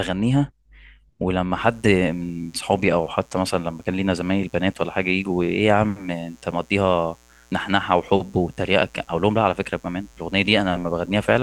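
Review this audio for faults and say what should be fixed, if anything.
A mains buzz runs from 1.57 s to the end of the clip at 11.43 s, roughly 35 dB below the speech. Sharp switching spikes recur twice per 60 Hz cycle, stacking harmonics into the kilohertz range and producing a steady, raspy edge under the speech. To prevent it, keep dimmers and switch-mode supplies off the recording circuit and use properly shielded, balanced cabling.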